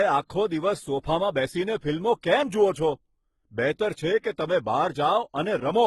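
Right through the speech, two kinds of codec damage sit on top of each other, which sounds like transcoding between lossy codecs, likely a low-rate HE-AAC pass fed into Opus. Opus re-codes the earlier artefacts and adds its own, and nothing survives above 18.9 kHz.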